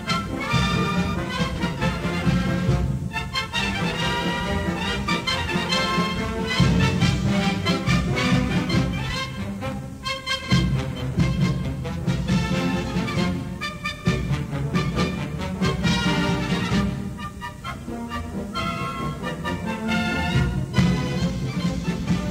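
Three brief dropouts show up in the audio, at 1.54–1.60 s, 10.42–10.48 s and 13.96–14.02 s. They're AAC frame loss with concealment: each gap, around 43 ms and consistent with a single lost frame, gets patched from the previous spectrum, so you hear a quick smeared, noisy blip.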